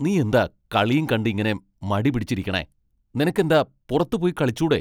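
No technical faults can be heard in the recording.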